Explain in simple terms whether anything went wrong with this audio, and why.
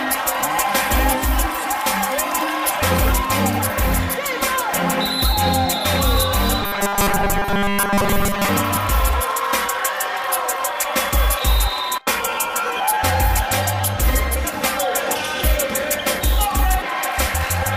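From 6.62 to 8.49 s the sound turns hard and metallic, a steady 200 Hz buzz laid over it. That's robotic sound from repeated short buffers. The likely cause is new audio not arriving fast enough, so the player kept looping the last tiny slice, about 5 ms, instead of going silent. That loop repeating 200 times a second is the buzz you hear. For most of that stretch you're hearing repeats, and the real audio underneath got skipped.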